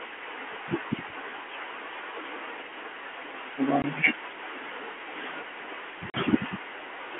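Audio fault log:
3.82–3.84 s and 6.10–6.14 s, packet loss filled with silence: The speech drops out twice, for 20 ms and then 40 ms. This fits one and then two lost 20 ms packets that the receiver replaced with digital silence instead of concealing them. Each gap starts and ends abruptly. On the waveform, the trace falls to a flat line near silence with sheer walls. On the spectrogram, each hole is a blank vertical stripe, cut through the telephone band of the G.711 line.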